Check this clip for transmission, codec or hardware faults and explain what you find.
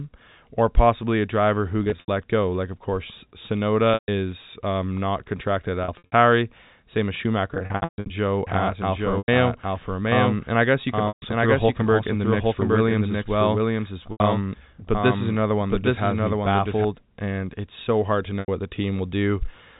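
The clip has two faults: repeated packet loss with pitch repetition, and a doubled audio track.

Packet loss with pitch repetition occurs at 1.84, 3.94, 5.84, 7.54, 9.18, 11.08, 14.12 and 18.4 s. Each gap lasts 80 to 380 ms, the longest at 7.54 s. The first comes after "possibly a driver who", the second ends before "um not contracted at", and the last sits between "it's so hard to" and "what the". The receiver fills each gap by repeating the last pitch period. Short gaps sound like a held, buzzy tone. Longer ones fade out before the sound returns.

A doubled audio track runs from 8.47 to 16.85 s. A second copy, about as loud as the original, follows roughly 0.7 s behind. It is full-band and dry, with no decay or room colour, and it starts and stops abruptly. The likely cause is the same signal arriving again through a slower path. Everything within the telephone band up to 4 kHz is heard twice.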